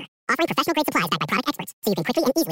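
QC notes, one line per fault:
Throughout: audio read two samples at a time (double speed). Speech races at 2x and sits a full octave (12 semitones) high. Each pair of samples is taken as one frame, as if the stream were two-channel or had samples twice as wide, so high frequencies fold back.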